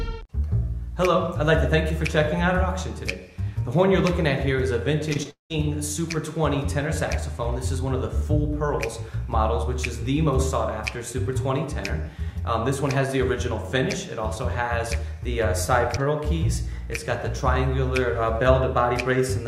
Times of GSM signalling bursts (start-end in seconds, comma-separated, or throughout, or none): none